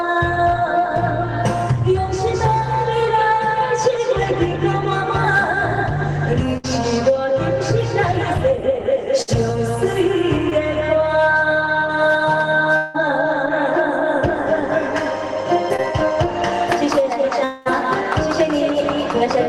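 At 6.57 to 6.66 s and again at 9.22 to 9.29 s there is a burst of packet loss. About 60 ms of sound never arrives in each case, and the receiver bridges the hole by stretching the last sound out and letting it sag in level, so it comes across as a brief held buzz or fading hiss before the audio picks up further on. It is longer and more obviously sustained than the short losses.

At 10.49 to 10.53 s and 15.76 to 15.80 s there is short concealed packet loss. Only about 20 ms goes missing each time, and the repair is so brief that it is heard as a quick smear or wobble rather than a held sound. What separates it from the bursts is that no sustained tone forms before the real audio blends back in.

At 12.77 to 12.96 s and 17.44 to 17.67 s the sound turns into an extended buzz or hiss that trails off, lasting roughly 180 ms and 220 ms. The audio then resumes with that stretch gone, which most likely comes from a long network dropout. 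Unlike the bursts, the concealment runs long enough to decay audibly, though it never reaches true silence before the sound returns.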